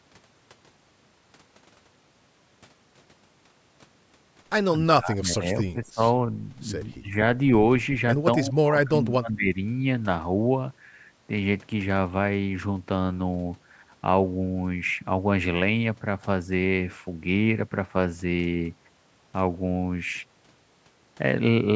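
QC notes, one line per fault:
4.78–6.0 s, 6.92–7.14 s and 8.38–9.57 s, speech suppressed in double talk: the talker's level sags in patches, deepest at about 20 dB in the first and third runs and about 15 dB in the brief middle one. This is likely an echo canceller mistaking the near voice for loudspeaker echo. The waveform shows the envelope pinched in short chunks, and the spectrogram shows energy dimming in gaps below the 8 kHz ceiling.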